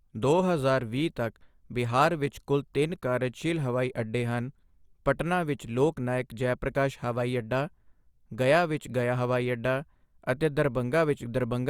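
Nothing in this speech recording sounds like a technical fault, so there's nothing to flag here.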